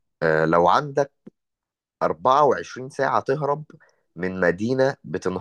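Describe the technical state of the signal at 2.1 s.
At 2.1 s the speech carries faint, evenly spaced ticks, roughly five per second, part of a run of clock slip clicks lasting from 0.33 to 5.38 s. They likely come from two unsynchronised device clocks drifting about 100 ppm apart, dropping or repeating one sample at each slip.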